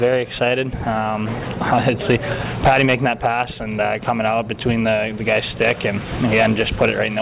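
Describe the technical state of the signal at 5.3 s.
At 5.3 s the signal is intact, with no dropout, distortion or other fault to be heard.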